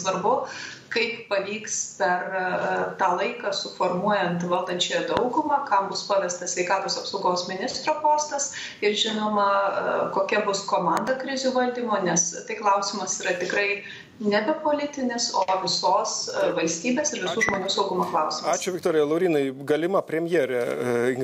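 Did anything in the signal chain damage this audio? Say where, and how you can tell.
Yes. Loud pops sit over the sound, which carries on beneath: one at 5.17 s and doubles at 10.97 to 11.10 s and 17.49 to 17.56 s, about 15 to 20 dB above the signal. Likely cause: a voltage step in the analogue wiring, from a switch, plug or static.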